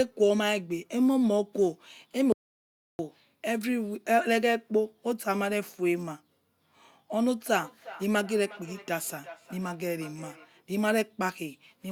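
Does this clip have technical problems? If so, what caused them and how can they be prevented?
Yes. From 2.32 to 2.99 s the speech cuts to dead silence with no room tone, and about 0.67 s of speech is lost. This audio dropout to silence most likely came from the input briefly disconnecting or muting while recording continued. Secure cables and connections and watch for stray mutes.

From 7.17 to 10.52 s each word returns roughly every 0.4 s, thinner and ringing, at most about 20 dB below the speech. This is feedback echo between two devices: a second device in the room replays the call and the first microphone picks it up, outside its echo canceller's reach. Join from one device per room, or mute the other's speaker and microphone.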